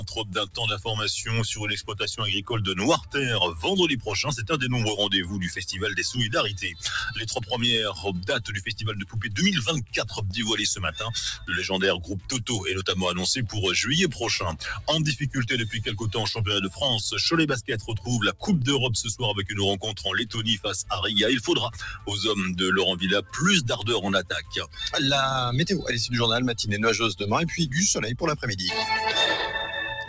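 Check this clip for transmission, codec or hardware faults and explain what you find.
The problem is a speech noise suppressor left running on non-speech audio. It carries on from start to finish, heard through a call path whose top end stops at 8 kHz, which fits G.722 at 64 kbps.

Noise suppressor applied to music or sounds, throughout: the suppressor mistakes steady, sustained material for background noise and keeps pulling it down while letting onsets pass. The level swings by something like 10 dB, so the sound pumps and thins as held parts sink.

Sound cut by the noise suppressor, at 0.0–0.86 s, 2.98–12.29 s, 14.53–14.88 s, 15.89–16.79 s, 17.78–18.45 s, 19.38–22.08 s and 23.21–24.78 s: in these stretches the suppressor clamps down harder. Drops reach about 12 to 13 dB, and about 7 dB at 15.89 s. Decays are cut short and sustained sound ducks audibly, adding up to roughly three seconds in the long 2.98–12.29 s stretch and fractions of a second elsewhere.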